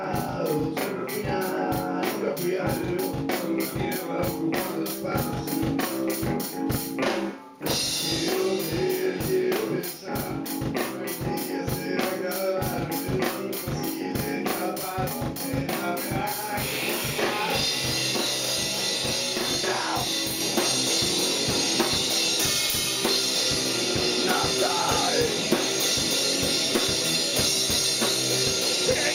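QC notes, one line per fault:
0.0 to 20.4 s, channel delay (doubling). One channel arrives 40 ms behind the other, and the two are summed to mono. The late copy sits at equal level, so each sound is heard twice as a tight doubling or slap echo.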